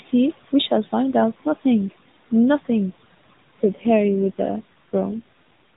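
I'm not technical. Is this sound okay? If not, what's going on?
No. From 3.6 to 5.2 seconds the voice turns rougher and more synthetic. This is an AMR rate drop: the phone network briefly cut the mobile codec's bit budget.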